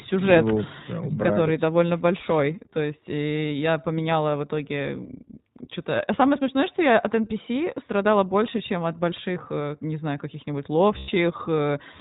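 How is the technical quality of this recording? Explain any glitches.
The recording has clear but limited quality. Two faults are audible: a codec character that runs through the whole clip, and one short dropout near the end.

The iLBC codec is present from start to finish. The speech is band-limited, with nothing above 4 kHz, so it sounds narrow and telephone-like. The codec rebuilds each short frame on its own from a simplified excitation. That gives the voice a slightly rough, synthetic edge. The damage is plainly audible, and it fits a setting around 15 kbps with 20 ms frames.

Lost iLBC frames cause a gap from 10.98 to 11.10 s, lasting about 100 ms. Packets went missing, and the decoder filled the hole by repeating the last pitch cycle blended with noise. The result is a brief held, buzzy, breathy vowel in place of real speech. Each iLBC frame stands alone, so the voice snaps back to normal almost immediately after the gap.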